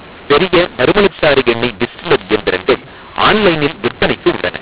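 From start to finish the speech carries a mu-law and A-law mix-up: samples coded as A-law are being decoded as mu-law, so each 8-bit code maps to the wrong level on the logarithmic curve. Loud and soft parts swap scale unevenly, giving a harsh, gritty distortion, and pauses fill with hiss instead of falling silent. The waveform shows jagged, uneven peaks and a raised floor between phrases. On a spectrogram, broadband noise smears across the band up to the 4 kHz telephone limit.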